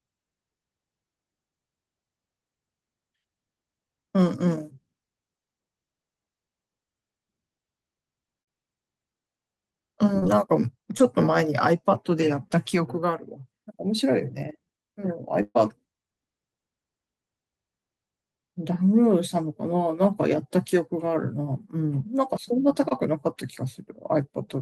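Speech runs through two bursts of packet loss, at 8.41–8.49 s and 15.43–15.57 s. At these points the receiver extends the last sound into a held buzz or fading hiss: about 52 ms filled for 60 ms missing, then 121 ms filled for 120 ms missing, with 40 ms of outright silence in the second burst. Each time, speech resumes further on with material skipped. Shorter instances of short concealed packet loss appear at 10.19–10.36 s, 10.97–11.01 s and 22.89–22.93 s. Each of these leaves only a brief smear or wobble, from about 17 to 30 ms of synthesized fill covering 20 to 40 ms of lost audio, with roughly 10 ms of extra delay at 10.19 s. Length and sound tell the two kinds apart: these quick blends back into real speech never become an audible sustained tone, silence or jump.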